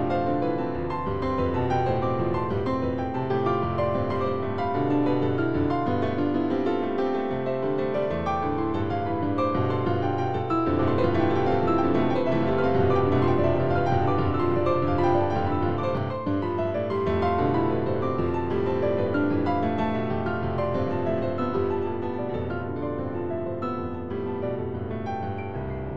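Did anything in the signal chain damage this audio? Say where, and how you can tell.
Yes, there's a doubled audio track from 10.79 to 15.97 s: a full-band copy about a second behind, at roughly the same level, with no decay or room colour, cutting in and out abruptly. That's likely a second, slower capture path or an edit holding two offset copies.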